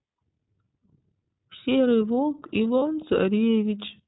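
Speech coded with the iLBC codec throughout, with plainly audible codec damage: the band stops at 4 kHz, and the voice has a slightly rough, synthetic grain. The character points to iLBC's 30 ms frame mode, which fits a rate of about 13.33 kbps. What separates this from a generic low-bitrate narrowband codec is that each frame's excitation is coded on its own. The roughness stays evenly spread rather than smearing or building up across syllables. From 2.79 to 2.83 s, lost iLBC frames cause a brief held, faintly buzzy vowel-like sound, which suggests a single missing 30 ms frame. The decoder filled the gap by repeating the last pitch cycle mixed with noise. This differs from concealment in codecs that depend on earlier frames, where the damage lingers for several frames after the loss. Here the voice is clean again almost immediately, because the next frame decodes independently.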